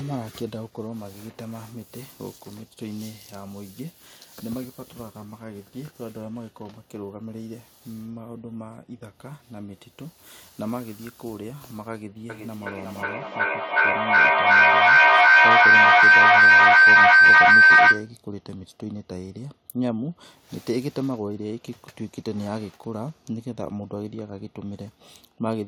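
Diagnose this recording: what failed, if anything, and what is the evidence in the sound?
What failed is the acoustic path around the call, a classic feedback howl. From 12.3 s to 18.16 s a tone builds around 1.5 kHz, pulsing roughly every 400 ms, and peaks about 18 dB above the speech. That signature fits two devices in the same room joining one call. Each pass from microphone to loudspeaker and back adds level, so the loop keeps circling and narrows to whatever frequency it favours until it takes over.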